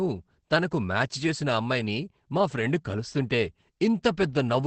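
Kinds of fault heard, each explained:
Opus voice compression: a low-bitrate SILK-mode Opus encode, about 12 kbps, left the speech muffled and slightly hoarse, with nothing above 8.6 kHz.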